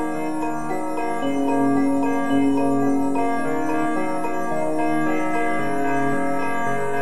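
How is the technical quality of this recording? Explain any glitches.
The music comes through with no audible technical faults, and the signal stays intact and stable throughout.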